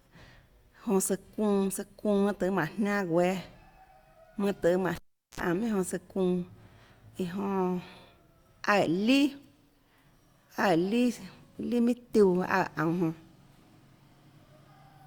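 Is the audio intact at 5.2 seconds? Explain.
No. From 4.95 to 5.40 s the cable is pulled and plugged in: a pop, about 0.4 s of near silence as the live lead comes out, then a 61 ms burst of 60 Hz mains buzz while only the tip makes contact, and a second pop as the speech returns.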